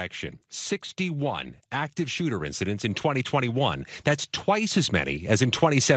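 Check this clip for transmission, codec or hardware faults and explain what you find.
There are two kinds of fault here: the level creeps up twice, and the coding briefly gets rougher.

Automatic gain rising: from 0.97 to 3.85 s the voice and the room noise swell together by about 6 dB, and it happens again from 4.46 s to the end. That's the AGC deciding the input was too quiet and slowly winding its gain up.

Call bitrate drop: between 1.12 and 2.33 s the speech turns coarser and watery for about 1.15 s, then clears. That sounds like the bandwidth estimate fell and Opus was pushed from around 32 kbps down to roughly 17 kbps, so it coded with fewer bits.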